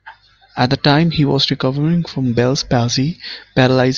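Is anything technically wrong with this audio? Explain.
No, nothing technically wrong stood out on listening to this speech clip.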